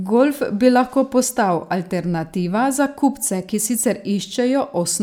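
A short piece of speech, and honestly there's nothing technically wrong to point to here.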